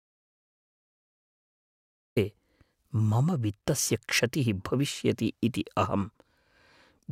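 Audio dropout to silence from the start to 2.17 s: the speech recording opens on silence without room tone, likely from input lost while the recorder kept writing silence.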